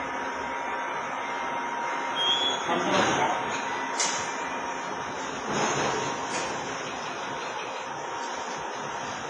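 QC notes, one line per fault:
throughout: WMA compression, likely. The sound rings and smears, with a washy hiss that breathes with the signal and nothing above 10.6 kHz. Long transform blocks spread quantisation noise across tens of milliseconds and drop weak lines. This heavy damage fits roughly 24 kbps.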